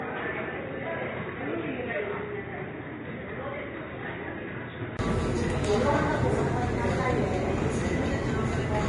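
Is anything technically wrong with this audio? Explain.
Yes, two problems. From 0.0 to 4.99 s the sound is dull and about 10 dB quieter, with nothing above 3.8 kHz and a faint added noise floor. That's likely an input switched to a poorer device, ending with a 20 ms gap at the switch back.

Throughout, there's hiss and graininess with nothing above 10.6 kHz. That points to Vorbis compression at a low bitrate, around 25 kbps, where the coarsely quantised treble turns to noise.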